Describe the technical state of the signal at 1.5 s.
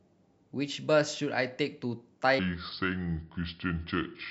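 The audio at 1.5 s is intact, with no audible technical fault in the speech at that point.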